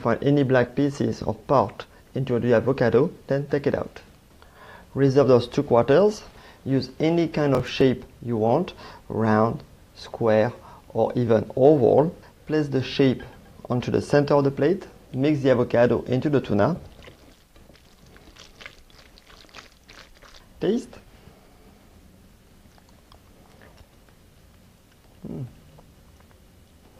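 Around 7.55 to 7.81 s there's a quick burst of processor overload crackle: roughly seven tiny buffers, about 3 ms each, get skipped, tearing the sound.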